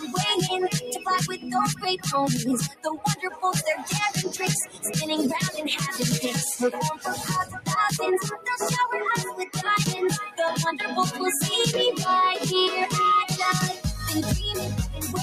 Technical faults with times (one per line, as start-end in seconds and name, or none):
0.00-15.23 noise suppressor applied to music or sounds
0.76-1.07 sound cut by the noise suppressor
1.33-1.49 sound cut by the noise suppressor
1.75-2.06 sound cut by the noise suppressor
2.69-2.86 sound cut by the noise suppressor
3.15-3.43 sound cut by the noise suppressor
4.65-4.89 sound cut by the noise suppressor
6.95-7.68 sound cut by the noise suppressor
9.31-9.59 sound cut by the noise suppressor